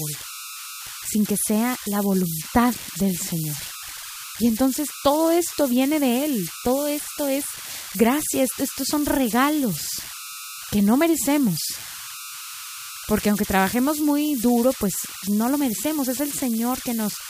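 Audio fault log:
Throughout: converter idle tones. There's a whistle somewhere around 1.5 kHz sitting in the pauses, plus a grainy hiss under the quieter speech, all at about 11 dB below the signal. That's an undithered delta-sigma converter settling into repeating bit patterns whenever the input gets small.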